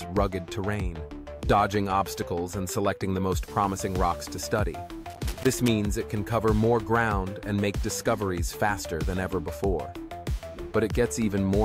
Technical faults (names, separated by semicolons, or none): loose connector crackle